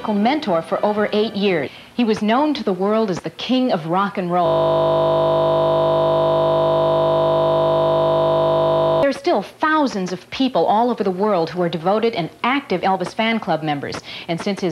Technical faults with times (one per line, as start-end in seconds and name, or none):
4.46-9.03 system hang loop